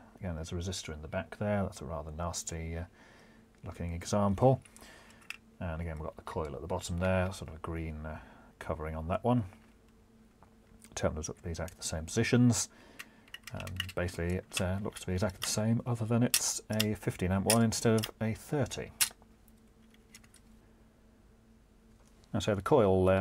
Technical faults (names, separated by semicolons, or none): sample clock jitter